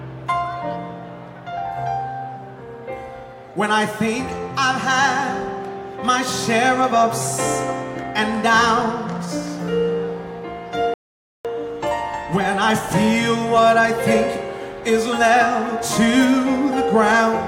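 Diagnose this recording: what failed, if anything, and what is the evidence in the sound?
A playback stall at 10.94 s: the sound halts mid-flow and the output stays silent for about 0.51 s, resuming at 11.45 s. This points to the playback stage, most likely a player that ran short of data or had its output thread blocked until it recovered.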